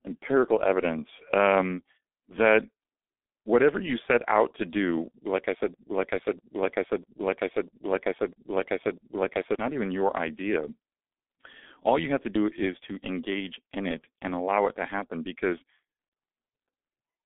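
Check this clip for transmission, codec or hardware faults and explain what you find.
Two faults are present: a low-rate speech codec across the whole clip, and a repeating loop in the middle.

G.723.1 codec, throughout: the speech sits in a narrow telephone band of roughly 250 Hz to 3.5 kHz, with nothing above 3.7 kHz, and the damage is heavy. The codec rebuilds each 30 ms frame from a coarse vocal model at a rate that fits about 6 kbit/s, so the voice sounds muffled and hoarse and the consonants smear. A plain band-limited phone line would be dull but clean. The rasp and blurred articulation point to the codec.

Broken-record loop, 5.74 s to 9.55 s: right after "do like I said", a 0.65 s fragment repeats exactly, back to back, six times. Speech resumes at "not even your idea". The player or stream most likely stalled and kept resending its last held buffer, and the audio that belonged in those seconds is lost. 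This differs from packet-loss concealment, which fades or warbles briefly. Here the repeats are identical, sample for sample, and they last almost four seconds.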